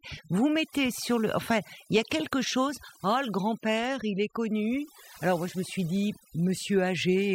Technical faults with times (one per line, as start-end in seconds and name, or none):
0.00-7.34 overdone noise removal